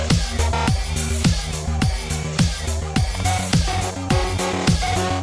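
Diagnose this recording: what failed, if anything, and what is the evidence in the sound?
Nothing failed; no faults heard.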